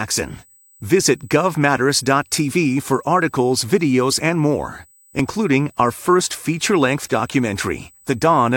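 Speech, with a steady USB whine at 8 kHz, about 35 dB below the voice, throughout. Current drawn in 125-microsecond microframes leaks through power or ground. Two tiny skips occur from overlap between stream segments, at 1.23 s and at 5.19 s, just after "videos and more". Overlapping timestamps on 1-second segments make the player cut real audio, so the waveform jumps.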